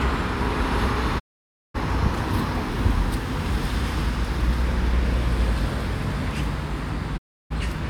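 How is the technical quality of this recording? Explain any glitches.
Two digital broadcast dropouts break the recording. From 1.18 to 1.76 s, and again from 7.16 to 7.52 s, the sound fades out over about 20 ms, stays silent for roughly half a second and then a third of a second, and resumes further along. The receiver lost or rejected corrupted frames and muted until good ones arrived. The gap lengths fit frames of about 32 ms each. The quick fade and the skipped material set it apart from an edit splice or packet-loss concealment.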